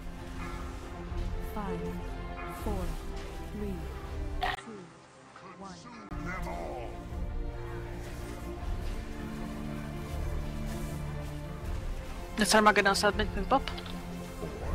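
From 4.55 to 6.11 s the audio turns dull and quieter, losing everything above 9.6 kHz, with a brief gap and new background noise, likely an input switched to a poorer device.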